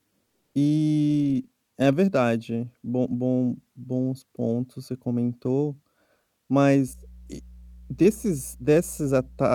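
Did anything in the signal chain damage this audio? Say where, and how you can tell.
Yes, mains hum creeps in from 6.88 s to the end: a steady 60 Hz tone, roughly 25 dB under the speech, pointing to a ground loop in the analogue wiring.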